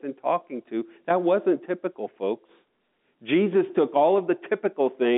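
No technical faults are audible.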